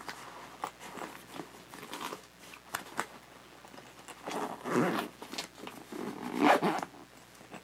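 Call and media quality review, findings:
Mains buzz, throughout: steady raspy buzz on 60 Hz harmonics reaching into the kHz range, about 25 dB below the signal. Switching spikes twice per mains cycle, from a dimmer, rectifier or unshielded run coupling into the analogue path.

Clock drift buffer slips, 1.53 to 7.26 s: regular clicks every 1.91 s, about four in total. Likely two independently clocked devices drifting by a couple of hundred ppm, so the buffer periodically drops or repeats a small block of samples.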